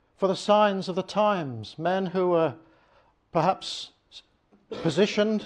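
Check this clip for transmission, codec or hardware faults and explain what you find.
Nothing stood out on listening to the clip.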